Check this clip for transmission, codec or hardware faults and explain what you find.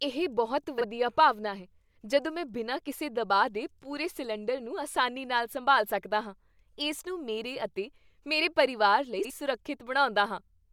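Two brief garbled flutters break the speech. Both come from frames out of order.

At 0.78 to 0.84 s, between "ਇਹ ਬਹੁਤ" and "ਭਾਵਨਾ ਹੈ ਜਦੋਂ ਮੈਂ", and again at 9.19 to 9.31 s, right after "ਮੇਰੇ ਅਤੇ ਮੇਰੇ ਪਰਿਵਾਰ", two adjacent blocks of audio arrived swapped and were decoded in that order. The halves are 26.1 ms and 52.2 ms long, which points to one and then two codec frames exchanged. No time is lost.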